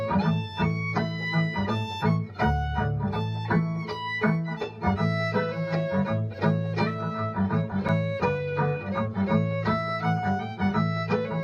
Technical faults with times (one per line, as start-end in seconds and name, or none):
7.88 block of digital silence